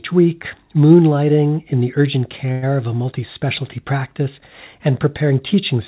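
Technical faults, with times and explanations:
2.52–2.64 s, call audio freeze: right after "moonlighting in the urgent", the sound stalls for about 0.1 s as a fading buzz before resuming at "of a multi specialty", nothing lost, only delayed. Likely cause: held-up packets draining the jitter buffer, so the receiver stretched the last sound.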